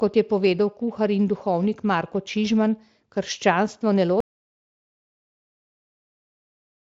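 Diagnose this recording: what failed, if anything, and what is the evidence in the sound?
The failure is an audio dropout to silence at 4.20 s: the speech cuts off mid-flow and the rest of the clip, right through to the end, is silent with no room tone at all. That dead-flat floor tells you the recorder kept writing samples after its input vanished, so the stage is upstream at capture. The likely cause is a lost input, such as a device unplugging, a link failing or a stray mute. The Speex coding before the cut is clean, with the band topping out near 7.7 kHz.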